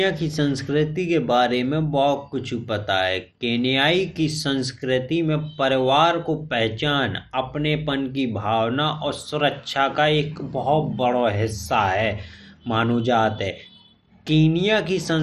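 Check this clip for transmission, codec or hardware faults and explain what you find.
One codec fault runs through the whole clip: what sounds like MP2 compression. From start to finish the speech is dull, with nothing above 13.6 kHz, and carries a gurgling, granular roughness. The likely cause is a low bitrate, around 56 kbps. Too few bits for the 32 sub-bands switch upper bands off and coarsely quantise the rest. A plain low-pass filter would leave the speech clean. The flickering, grainy texture is what marks this as codec damage.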